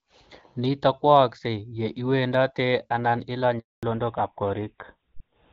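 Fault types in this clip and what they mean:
Handover gap: the call was passed from one network to another and no speech frames arrived during the switch, so the speech dies away right after "ye iwendatee ana" at 3.59 s and stays silent for 240 ms until the new link resumes at 3.83 s.
Fallback to narrowband: from 3.83 s to the end, the call leaves HD Voice, whose clean sound before the gap fits AMR-WB at about 12.65 kbit/s, for an older codec that points to GSM full rate. Nothing above 4 kHz remains, so the speech turns duller and rougher.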